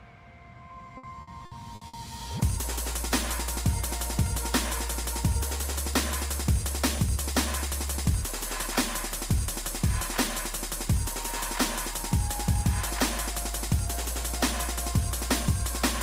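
Repeated packet loss (robotic sound) runs from 0.97 s to 1.96 s. Across this one-second stretch the stream keeps losing data, with five separate gaps, the longest about 60 ms. Each hole is papered over by extending the sound that came just before it, so roughly 300 ms, about 30% of the span, is filler. The audio turns choppy, stuttering with fragments missing.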